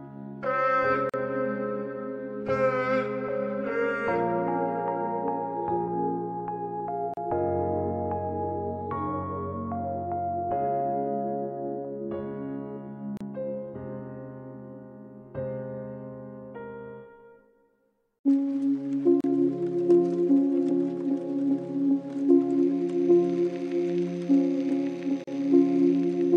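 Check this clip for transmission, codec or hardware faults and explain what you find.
Short dropouts recur at the joins between separately encoded pieces of the audio. There is one kind of fault, the gap at a join of encoded pieces. It occurs at 1.10, 7.14, 13.17, 19.21 and 25.24 s, one every 6 seconds. The first gap lasts about 42 ms, and the others about 34 ms. Each piece kept its encoder's start delay and end padding when the pieces were joined. The sound cuts out, with its edges smeared, then resumes where it stopped.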